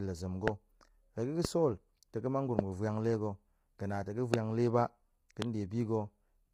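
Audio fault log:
throughout: low-delay AAC compression. The speech sounds rough and grainy, with noise between harmonics. This likely comes from AAC-ELD at a low bitrate, around 24 kbps.
0.48–0.50, 1.45–1.47, 2.59–2.61, 4.34–4.36, 5.42–5.44 s: loud pop. Single sharp pops, about 15 to 25 dB above the speech, which continues underneath. A likely cause is a brief voltage pulse.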